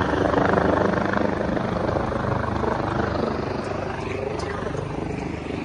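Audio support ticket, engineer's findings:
No transport or processing faults found in the signal on review; no dropouts, glitches, level or timing anomalies to attribute to any component.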